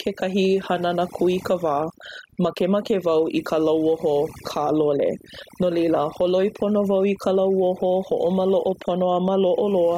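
Both faults run through the whole clip. One is overdone noise removal. A noise reduction stage was pushed too hard. Frequency bands near its noise estimate get cut deep or shut off. Quiet parts of the speech vanish with them. The background drops and breaks up into twinkling specks.

Gain pumping is also present. The swing is around 10 dB. Loud and soft passages sit close together, and the sound feels squashed. The likely cause is gain set too high, with a fast limiter clamping down.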